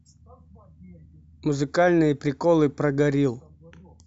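No technical faults are audible.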